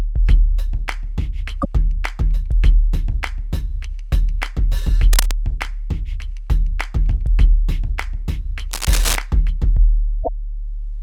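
A short glitch cuts into the sound at 1.58 to 1.65 s and again at 10.20 to 10.29 s. This is damaged data in a compressed stream: the decoder hits corrupted frames, loses sync and skips ahead to the next readable frame header. Brief bursts of rough scratching also ride over the audio at 5.13 to 5.38 s, fairly low at about 10 dB below the signal, and at 8.71 to 9.16 s, louder at about 5 dB below. That is cable scratch noise, likely from a worn cable or connector being moved, its contact resistance jumping rapidly and adding uneven noise.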